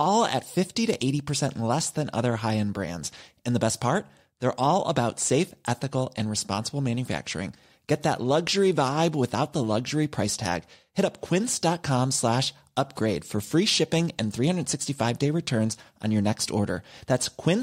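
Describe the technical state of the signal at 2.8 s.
The speech at 2.8 s plays through intact, with no dropout, clipping, glitch or other fault at that moment.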